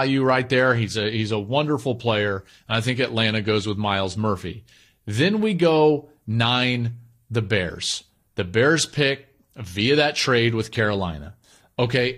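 Compressed frames skipped at 7.69 to 7.71 s in this speech recording. The sound jumps forward by around 20 ms, which points to a single compressed frame that was either missing from the stream or rejected by the decoder as corrupt.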